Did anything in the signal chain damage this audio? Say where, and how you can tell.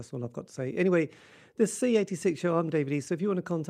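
No, nothing in the signal chain damaged this speech recording. No stage from capture to playback leaves any audible trace of harm.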